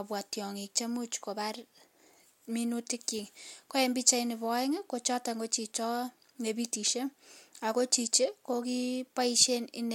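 No technical faults are audible.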